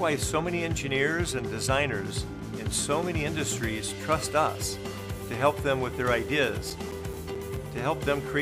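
From 6.27 to 7.78 s, eight CD scratch ticks recur about five times a second, the player interpolating or muting unrecoverable data each disc turn; these appear as thin vertical spectrogram lines and brief waveform gaps of a few milliseconds.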